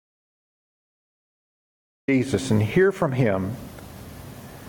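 The clip opens in an audio dropout to silence that lasts until 2.08 s. The gap is silent, with no room tone, likely from a lost input.

Gain pumping runs throughout. The level swells between loud sounds, then ducks by around 10 dB under each one. Excessive input gain driving a fast limiter is the likely cause.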